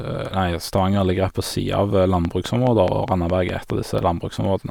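A speech clip with a train of clicks running from 2.25 s to 3.71 s: a steady ticking at about 4.8 clicks per second, evenly spaced, roughly seven of them, each poking well above the speech at around 15 dB louder. They all have much the same shape and carry on through the gaps as well. A regular pulse like that is likely interference from nearby equipment or a faulty connection or power supply.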